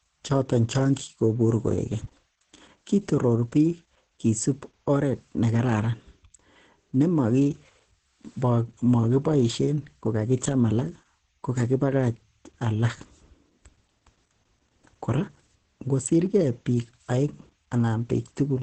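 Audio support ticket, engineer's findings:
Opus voice compression, entire clip. Speech muffled, hoarse, slightly robotic. Nothing above 8 kHz: wideband SILK linear-prediction mode, encoder band limit strips sibilance and air. Coarse excitation coding gives the rasp. Heavy damage points to a bitrate near 10 kbps.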